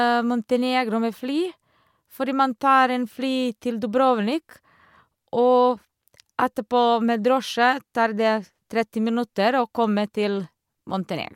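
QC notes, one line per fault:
No faults heard anywhere in the speech.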